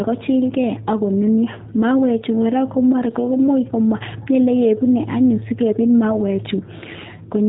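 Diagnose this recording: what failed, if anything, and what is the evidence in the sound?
G.729 codec damage runs throughout the speech, at the codec stage. Nothing passes above 3.8 kHz, and the speech sounds plainly rough and synthetic, because it is rebuilt from a vocal tract filter, a pitch predictor and sparse pulses. This fits an 8 kbit/s G.729A encoder.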